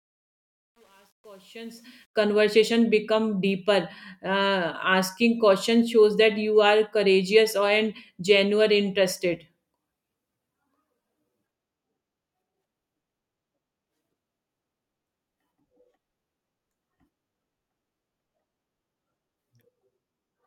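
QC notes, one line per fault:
0.00–2.22 s, truncation distortion on a fade: The fade-in sounds gritty rather than clean, and is roughest from 0.00 to 1.86 s. The fade stage rounds each sample to too few bits without dither, which fits about 9-bit resolution, so at low levels the speech waveform collapses into a handful of square steps that crackle.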